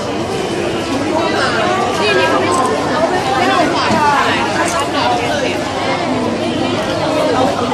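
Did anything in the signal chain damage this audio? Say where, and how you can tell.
No, nothing I can hear points to damage at any stage of the chain between capture and playback.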